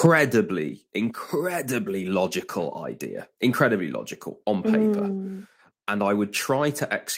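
At about 0.06 s the speech and background both drop by about 4 dB in one step, likely a microphone volume stepped down by the call software's automatic input gain control.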